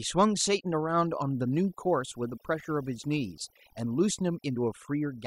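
From start to finish, the background between phrases drops to near silence, broken only by twinkling specks. This is overdone noise removal: a noise reduction stage was pushed too hard on a noisy recording, so individual frequency bands that came close to its noise estimate were cut deeply or switched off, and the quieter parts of the speech were stripped away along with the noise.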